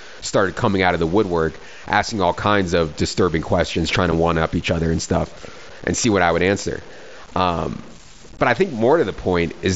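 Throughout the speech there is a grainy distortion that tracks the signal. Quiet passages and decaying word endings turn gritty and sputter rather than fading smoothly, and the roughness rises and falls with the level instead of sitting as a steady hiss. The error lies roughly 25 dB below the speech. This is low bit depth without dither. The likely cause is samples truncated to about 7 bits with no dither, so the rounding error stays locked to the waveform.

At 4.11 s, between "disturbing questions trying to" and "one up each other", there is a brief hole of about 7.5 ms with abrupt edges. This is unconcealed Bluetooth headset packet loss. The gap fits a single dropped headset voice packet. Nothing fills it in, so the stream simply drops out for that instant and restarts with a hard edge. The wideband mSBC link carrying the speech shows its own light graininess on louder syllables.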